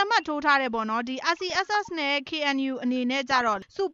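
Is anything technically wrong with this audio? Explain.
Yes, there is DAB burbling from 1.50 to 1.75 s and from 3.28 to 3.58 s. Bit errors slipped past error correction, corrupting MP2 audio data so wrong samples put short blips of noise into single sub-bands over the sound.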